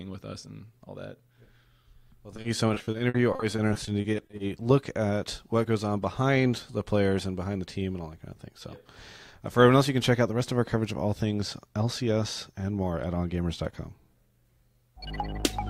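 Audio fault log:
2.36–4.65 s, repeated packet loss (robotic sound). Over two dozen short holes land in quick succession, none longer than 50 ms. Each is patched by stretching the sound just before it, about 470 ms in all, roughly a fifth of the stretch. The audio turns choppy and robotic.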